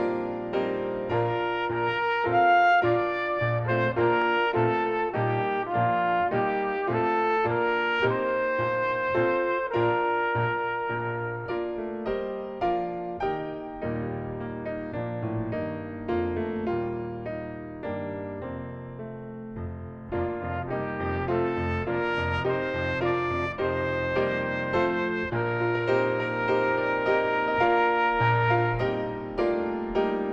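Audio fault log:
4.22–4.24 s, loud pop: a single sharp pop, peaking a few decibels above the surrounding sound, lasts about 20 ms while the audio carries on unbroken beneath it. That continuity sets it apart from a dropout or edit glitch, where the sound itself would break. The short, thumping pulse is likely a voltage spike from a plug, switch or static discharge, shaped by the downstream circuitry into a pop.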